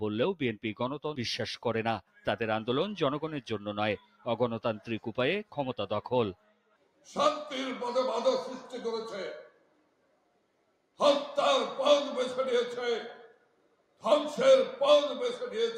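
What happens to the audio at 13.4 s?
At 13.4 s the audio is inside a stretch, from 13.28 to 14.03 s, where the sound is cut by the noise suppressor. The suppressor has classified this passage as noise and pulls it down harder than its surroundings, by up to about 12 dB. Sustained and decaying components sink or have their tails clipped short, while abrupt onsets mostly pass, so for roughly 0.7 s the sound dips and hollows out before recovering.

This dip sits on top of a broader problem: a noise suppressor built for speech is applied to non-speech sound across the whole clip. Because it treats steady tones, ambience and reverberant decay as noise to be removed, its gain rides up and down by around 5 dB. Attacks keep their level while held material and tails are pulled back, which gives the sound a pumping, thinned character.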